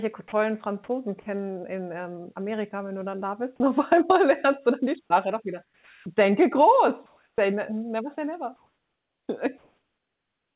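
At 0.28 to 0.32 s there is a likely case of sound dropped by the voice detector: the sender's voice detector seems to have mistaken part of the sound for background and stopped transmitting. For those 40 ms the receiver played comfort noise, so about 20 ms of real sound is missing and the sound is briefly replaced by steady noise before it comes through properly again.

From 5.64 to 6.06 s, just after "doch wieder", comes comfort noise in place of the background, likely because the sender switched to discontinuous transmission once it heard no speech. The room tone, which sits about 36 dB below the loudest speech, turns into flat, featureless synthetic noise about 4 dB quieter. The same substitution likely happens from 7.06 to 7.38 s, just before "ne never say never", where the background is about 48 dB down and the fill is about 2 dB quieter. It occurs again from 8.56 to 9.28 s, right after "ne never say never", and likely once more from 9.58 s to the end, where the background is about 53 dB down and the fill comes in about 2 dB louder than the real background. 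Each time the natural texture of the room goes smooth and lifeless until the fill ends. All of this sits within the narrowband call sound, which has nothing above 4 kHz.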